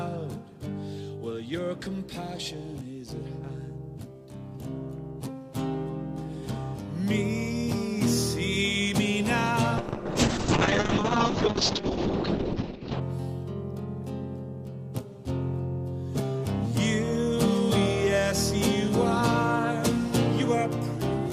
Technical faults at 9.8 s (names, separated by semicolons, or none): call bitrate drop